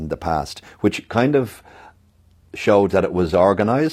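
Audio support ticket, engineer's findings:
Adaptive stream at a lower bitrate from 0.93 s, right after "the past", to the end. Sudden quality drop, no gap. Nothing above 14.9 kHz, codec artefacts rise. Player switched to a lower rendition on a slower connection. Sound fits roughly 96 kbit/s AAC dropping to 24 kbit/s HE-AAC.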